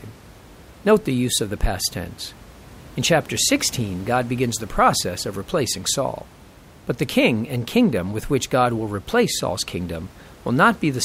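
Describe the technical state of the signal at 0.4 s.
At 0.4 s the signal is intact, with only the room's own background noise sitting about 23 dB below the speech.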